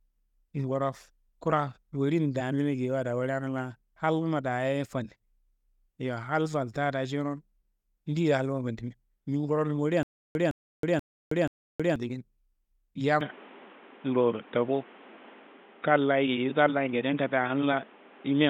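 From 10.03 to 11.96 s there is a stutter with silent gaps: the same 161 ms burst of speech plays four times, each followed by 320 ms of digital silence, repeating every 482 ms. This is likely a stalled stream replaying its last fragment on each retry. The exact repeats and dead silence set it apart from a plain dropout or an echo.

From 13.21 s to the end, the input switched to a poorer device, likely a different microphone or a headset call profile. Nothing remains above 3.8 kHz, the level shifts by about 5 dB, and a new noise floor sits about 30 dB below the speech. The change is immediate, with no silence at the switch. That new noise and tone separate it from a simple low-pass filter.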